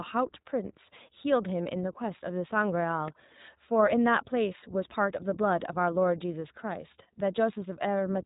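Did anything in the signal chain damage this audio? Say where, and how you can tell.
Yes. Throughout the speech there is a dull, band-limited quality, with nothing above about 3.8 kHz, and a plainly audible rough, synthetic edge. This is the iLBC codec stage. Each 20 ms frame's excitation is coded independently, which fits the 15.2 kbps mode.

At 3.08 s a sharp snap sits on top of the speech. The cause is likely an electrical switching spike picked up in the analogue wiring, where a nearby switch or discharge arced briefly and the line coupled it into the audio.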